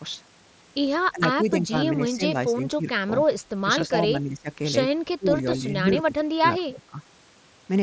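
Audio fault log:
1.11–1.23, 1.44–1.74, 2.09–2.22, 2.49–2.87, 3.06–3.10, 3.63–4.49, 5.18–5.67, 6.04–6.99 s, speech suppressed in double talk: the speech dips by about 15 to 20 dB in choppy pieces, likely an echo canceller ducking the near talker while the far side spoke. The waveform shows pinched envelope notches, and the spectrogram shows faded bands below the 8 kHz ceiling.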